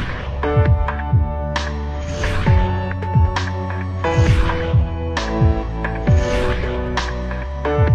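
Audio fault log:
Nothing to log here: I listened all the way and heard no problems at any point.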